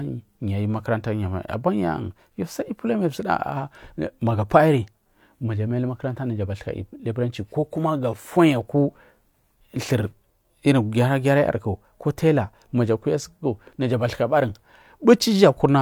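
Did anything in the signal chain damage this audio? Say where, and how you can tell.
No, nothing in the signal chain damaged this audio.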